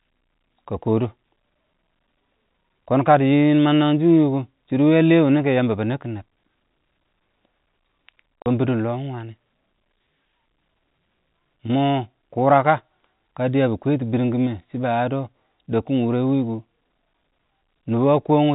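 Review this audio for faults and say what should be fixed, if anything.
At 8.42 s the speech drops out completely for 40 ms, until 8.46 s. This is packet loss filled with silence. Data went missing in transit, and the receiver played nothing in its place. A 40 ms hole fits two lost 20 ms packets. The sound stops and restarts abruptly. The speech runs through G.711 telephone coding, so it is band-limited to 4 kHz, but the gap is silence. To prevent this, enable packet loss concealment in the receiver.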